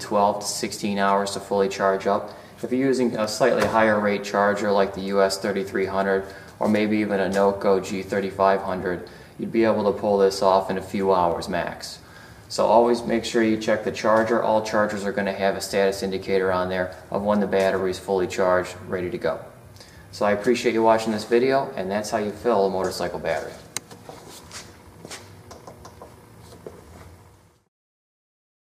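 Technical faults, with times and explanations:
3.24 s and 11.32 s, dropped samples: each time a single sharp click cuts through the sound, with nothing audibly missing on either side. The likely cause is a fraction of a millisecond of samples lost from the stream, so the waveform jumps abruptly to a later value.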